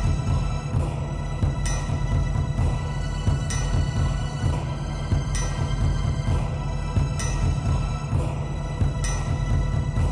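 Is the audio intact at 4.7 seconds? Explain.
Yes, the audio is intact at 4.7 seconds, with no dropout, click, distortion or other fault audible at that point.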